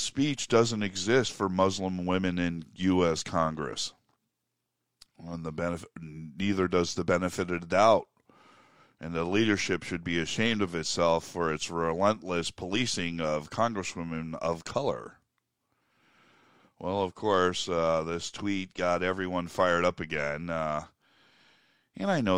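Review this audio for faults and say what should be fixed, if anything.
No faults found, so nothing needs fixing.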